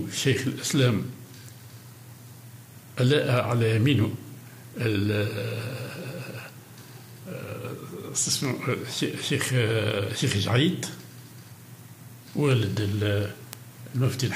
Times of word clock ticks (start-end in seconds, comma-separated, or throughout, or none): 0.33-13.53